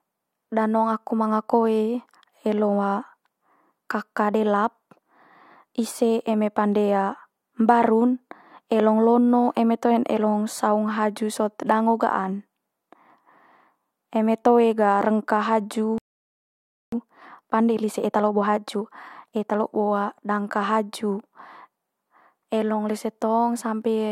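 At 15.98 s the speech cuts off mid-flow and the output falls silent until 16.92 s, a gap of about 0.94 s that shows as a flat, empty waveform and a blank spectrogram column. This playback stall was likely caused by the player running dry of data or being blocked.

From 16.92 s to 19.92 s, time-compressed catch-up runs the speech about 1.15 times faster at unchanged pitch, as short slices are removed and cross-faded. On a spectrogram, syllables crowd closer while harmonic spacing stays the same.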